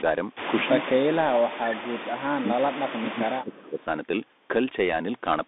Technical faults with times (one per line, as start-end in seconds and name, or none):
0.00-5.48 Bluetooth CVSD headset codec
0.67-3.86 speech suppressed in double talk